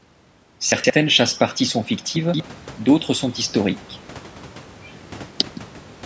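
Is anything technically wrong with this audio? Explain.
Yes. At 0.72 to 0.9 s, and again at 2.16 to 2.4 s just before "d'autres sont historiques", the speech jumbles briefly. These are chunks out of order. A 60 ms chunk plays two slots late the first time and three slots late the second, so nothing is lost, but each event leaves three hard joins.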